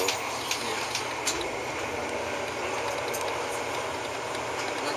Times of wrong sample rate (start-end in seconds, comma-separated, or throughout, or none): none